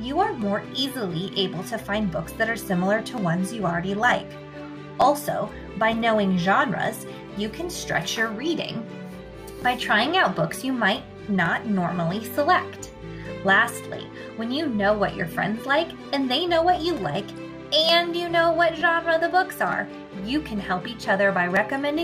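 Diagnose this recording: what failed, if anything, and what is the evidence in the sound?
Regular clicks every 0.92 s, from 0.42 s to 21.57 s (about twenty), show as thin full-band vertical lines on a spectrogram and small waveform steps. These are buffer-stage clock drift buffer slips, likely from clocks differing by around 700 ppm, each dropping or repeating a few dozen samples.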